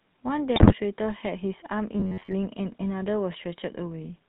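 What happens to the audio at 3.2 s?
At 3.2 s the speech is carried through the GSM full-rate codec, as it is for the whole clip, with plainly audible damage that fits the 13 kbps full-rate coder. The codec rebuilds the voice from a vocal-tract filter fed by a sparse, regularly spaced pulse excitation, giving a buzzy, gravelly roughness. On a spectrogram everything stops at a hard ceiling near 4 kHz, and the harmonics below it look grainy and smeared rather than clean.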